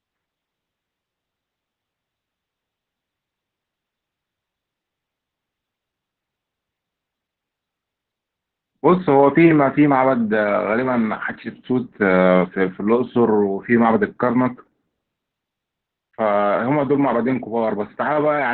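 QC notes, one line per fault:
throughout, Opus voice compression: the speech sounds muffled, hoarse and slightly robotic, with nothing above about 4.3 kHz. Narrowband SILK linear-prediction coding cut the band and coded the excitation coarsely, heavy damage that fits a bitrate near 8 kbps.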